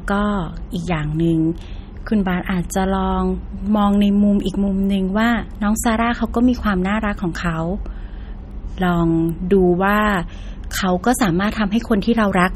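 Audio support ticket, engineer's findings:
Watery, swirly speech throughout, s sounds chirpy and metallic, nothing above 17.3 kHz. Likely MP3 compression at a starved rate, fitting roughly 32 kbps: encoder drops treble, weak bands flicker frame to frame. Plainly audible damage.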